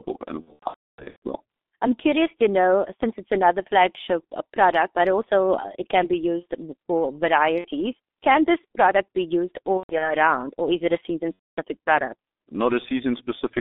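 Throughout, the speech passes through the G.723.1 codec. A low-rate frame coder that fits the 6.3 kbit/s mode is squeezing the voice into a narrow line band of roughly 250 Hz to 3.6 kHz, with heavy coding damage. Its slowly updated voice model leaves the speech muffled and hoarse, with smeared consonants and no low-end body.

From 0.42 to 1.22 s, VoIP packet loss concealed by the speech codec sets in. About 600 ms of audio goes missing, scattered across roughly 810 ms, with the longest gap near 300 ms. The decoder extends its last pitch and filter at falling gain. The speech stretches into a buzzy, fading drone, and it stays weak and distorted as packets resume.

Shorter concealed losses follow. At 7.58 to 7.68 s about 60 ms is lost, heard as a brief smear. From 9.77 to 10.15 s about 150 ms is lost over roughly 240 ms, with a longest gap of 120 ms, giving a stuttering buzz. From 11.34 to 11.58 s a solid 240 ms gap turns into a droning tone that fades before the speech recovers.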